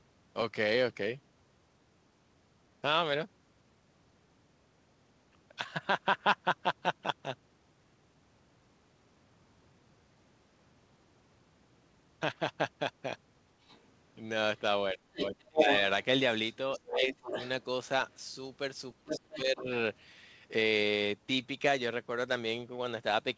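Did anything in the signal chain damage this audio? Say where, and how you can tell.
Yes. A second voice leaks through at 13.67–13.81 s (faint), 15.18–16.05 s (slightly louder than the talker), 16.74–17.63 s and 19.09–19.38 s (somewhat quieter). This is the other side's voice leaking through: in call processing, the echo canceller likely failed to fully remove the loudspeaker's sound from the microphone.

The talker's own speech drops away sharply, by roughly 30 dB at its deepest, at 14.94–15.67 s, 16.79–17.26 s and 18.97–19.68 s, each time while that other voice is present. This is speech suppressed in double talk: with both sides talking at once, the canceller likely couldn't separate its talker from the echo and attenuated everything.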